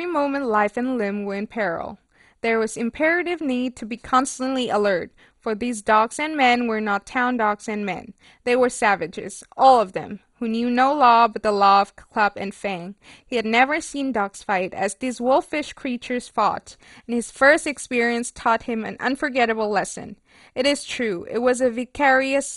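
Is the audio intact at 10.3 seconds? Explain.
No. At 10.3 seconds the speech sounds dull and gurgling, with a granular roughness and nothing above 11.2 kHz, as it does throughout. This is likely MP2 compression starved of bits, consistent with a bitrate near 56 kbps, switching off upper sub-bands and coarsely quantising the rest.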